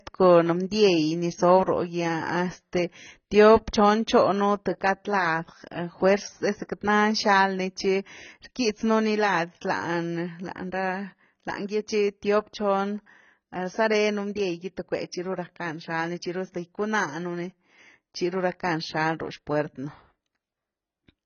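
From start to finish the speech has nothing above 6.6 kHz and carries a heavy, watery smearing, with sibilants turning fizzy and sustained vowels warbling. This is likely AAC compression, AAC-LC starved of bits in a way that fits a rate near 16 kbps, cutting the top and leaving spectral holes. A plain low-pass filter would dull the sound just as much, but it would not add this shifting, metallic swirl inside the remaining band.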